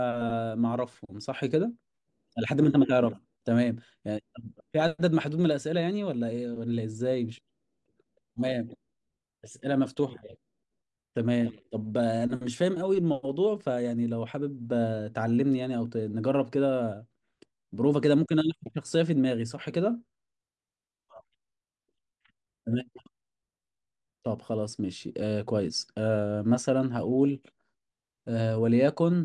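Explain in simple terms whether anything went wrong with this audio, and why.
Nothing went wrong here: the speech signal stays steady and intact all the way through, with nothing at any point interrupting or disturbing it.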